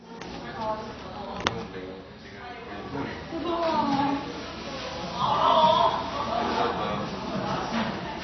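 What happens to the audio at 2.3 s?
At 2.3 s, as throughout, nothing sounds above 6.6 kHz and the sound is smeared and warbling, likely AAC compression at a low bitrate rather than a simple low-pass filter.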